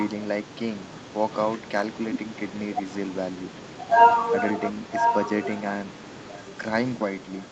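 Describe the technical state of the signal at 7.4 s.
At 7.4 s an echo leak is audible, spanning 7.22 to 7.51 s: a very faint copy of the speech arriving 1.02 s late, likely from a loudspeaker whose echo canceller let sound through. A spectrogram shows weak repeated harmonics, but the waveform barely changes.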